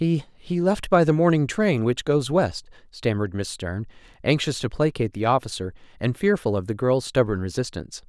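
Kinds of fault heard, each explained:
No technical fault can be heard in this speech recording. There is nothing to list for any kind of fault.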